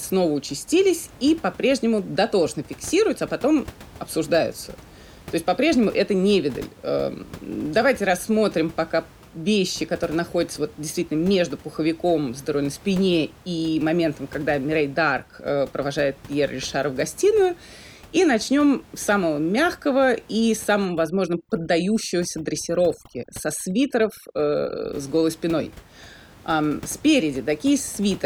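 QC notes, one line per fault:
20.85–24.93 s, overdone noise removal: from just after "с самого мягкого и" to "с голой спиной", the room noise, which sits about 23 dB below the speech, drops away and breaks up into twinkling, warbling specks. A noise reducer set too strong is shutting individual frequency bands whenever they fall near its noise estimate, taking quiet parts of the speech with them. A spectrogram shows scattered isolated blobs flickering in the gaps, and the waveform shows a lowered noise floor between words.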